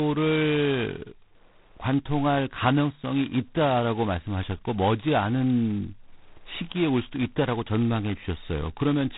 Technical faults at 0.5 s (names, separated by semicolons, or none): G.726 ADPCM